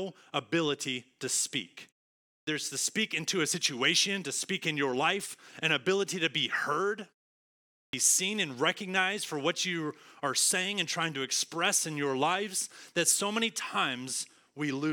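At 2.30 s, after "ability to speak", and at 7.74 s, before "seen and recognized for", speech bursts abruptly from silence missing about 170 ms and 190 ms. This is clipped start after a pause: the output device dozed during gaps of about 0.5 s and 0.7 s and woke late.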